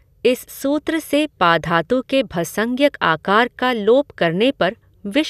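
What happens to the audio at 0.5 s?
Nothing goes wrong at 0.5 s: the speech carries on intact through that moment, with no dropout, click, distortion or other fault.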